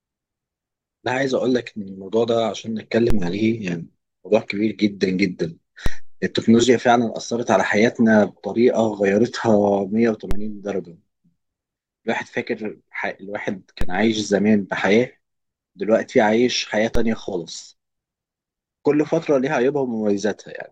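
A speech clip with a DC step problem: the waveform's zero line suddenly jumps at 3.10, 5.86, 10.31, 13.81 and 16.95 s, each landing as a low thump under the talking while the speech carries on unchanged. The first two steps are about -8 dBFS, the later three about -10 dBFS, and each offset drains away gradually, as a 2 Hz high-pass would let it. A converter recalibrating or an offset input switching in would do this.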